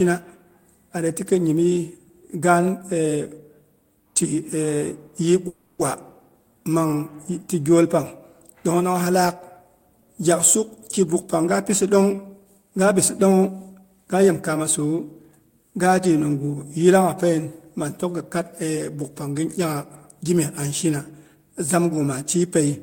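Speech, with a call audio freeze from 5.47 to 5.82 s: the last sound is stretched into a fading buzz or hiss for about 320 ms, then the talk resumes exactly where it stopped. Unlike a dropout, nothing is lost; the pause is simply inserted, likely from packets held up in transit that left the jitter buffer empty. From 11.25 to 14.34 s a jitter buffer speed-up plays the speech at 111% with unchanged pitch, trimming roughly 0.3 s as the backlog drains. The steady pitch is what separates it from a playback-rate error.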